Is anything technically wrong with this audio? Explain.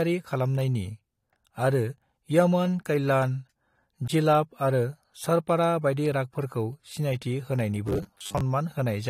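Yes, there's one problem. From 7.88 to 8.41 s the speech goes robotic, a rigid metallic buzz near 100 Hz, likely from about half the audio being replaced by repeats of a roughly 10 ms buffer.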